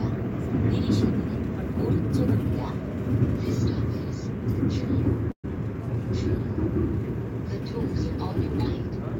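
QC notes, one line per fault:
5.31–5.46 s, call audio freeze: the last sound smears into a short fading buzz, then about 90 ms of silence, likely from delayed packets draining the jitter buffer. Unlike a dropout, nothing is cut; the audio resumes where it stopped, about 122 ms later.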